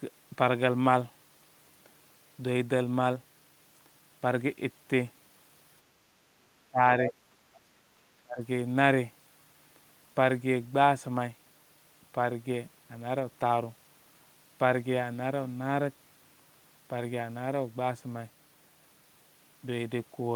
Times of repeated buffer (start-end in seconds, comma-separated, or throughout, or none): none